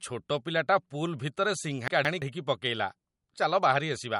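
Throughout, nothing is present above 11.2 kHz and the speech sounds watery and swirly, with smeared attacks, likely from MP3 compression at a low bitrate, around 48 kbps. From 1.88 to 2.22 s, chunks play out of order: a roughly 171 ms block arrives one chunk late, so the speech briefly jumbles.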